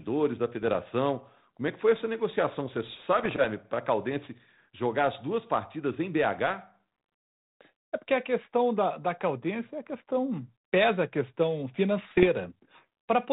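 Speech carried over an ADPCM telephone link, with nothing above 4 kHz. Bit errors on the ADPCM link cause pops and rough bursts at 0.63–0.76, 3.19–3.35 and 12.11–12.27 s. Each flipped bit upsets the decoder's step size and prediction, so the damage rings on briefly.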